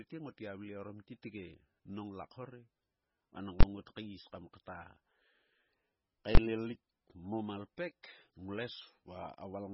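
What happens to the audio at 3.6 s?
At 3.61 to 3.63 s the output jumps to one extreme value, far beyond the speech peaks, for about 23 ms, which fits a 1024-sample processing block. A calculation produced invalid, infinite numbers that were pinned to the largest value. Because the block is so short, it lands as a single loud bang rather than separate pops. Unlike ordinary clipping, no sound survives underneath.

Around that moment, and throughout, nothing is heard above 5.6 kHz. The remaining audio swirls and sounds watery as weak frequency components switch on and off between frames. This is likely MP3 compression at a very low bitrate, near 16 kbps. A simple low-pass filter would cut the treble cleanly without this shimmer.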